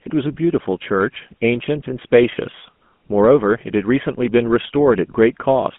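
Throughout, the speech carries GSM full-rate codec damage. The band runs 150 Hz to 3.4 kHz. Pulse-driven coding gives a plainly buzzy, gravelly roughness, consistent with 13 kbps.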